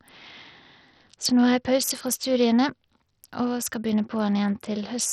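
Speech runs throughout with gritty noise, flickering treble and nothing above 14.6 kHz, likely heavy Bluetooth SBC compression at a bitrate near 64 kbps. It sounds gritty rather than swirly like MP3.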